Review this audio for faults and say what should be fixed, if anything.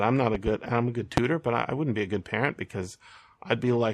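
Loud pop: a double pop at 0.35–0.50 s after "I'm not", and a stronger single pop at 1.17–1.20 s after "I'm a good". These are likely voltage pulses from a plug, switch, static or driver glitch. They show as tall waveform spikes and vertical broadband stripes on a spectrogram. Secure connections, ground the setup, and avoid switching equipment while recording.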